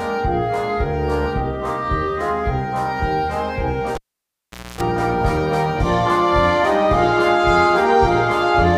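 A cable pulled and plugged in interrupts the sound from 3.95 to 4.81 s: a pop, about 0.81 s of near silence that includes a 0.26 s burst of 60 Hz mains buzz. On a spectrogram this appears as vertical click lines around horizontal hum bands.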